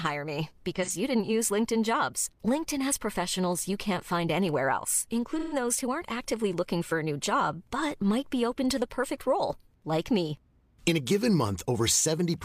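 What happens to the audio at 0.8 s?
An AAC frame was lost just after "hire me", and the decoder concealed it by rebuilding the missing 43 ms from the last good spectrum, which fits a single dropped frame. From 0.76 to 0.90 s, this AAC frame loss with concealment sounds like a brief smeared, noisy or phasey patch.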